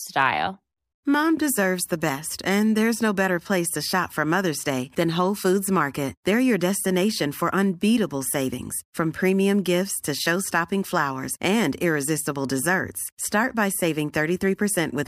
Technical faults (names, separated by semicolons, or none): hard clipping